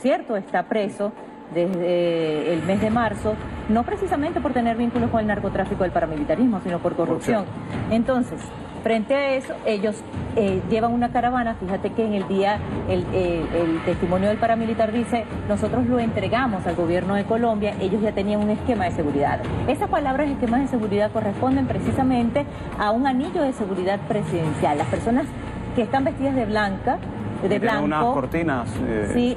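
At 1.74 s and again at 27.69 s the audio drops to a block of digital silence, lasting about 1.8 ms and 0.7 ms (the latter fits a 32-sample block). Output samples were zeroed without any fade, so each edge produces an abrupt discontinuity, heard as a brief tick.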